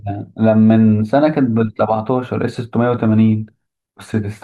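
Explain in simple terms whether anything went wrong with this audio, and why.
Nothing went wrong; no problems can be heard anywhere.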